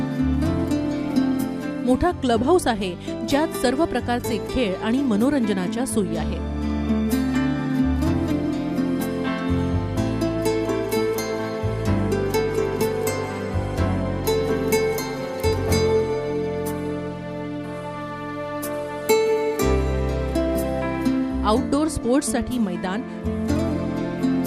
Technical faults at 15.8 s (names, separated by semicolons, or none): none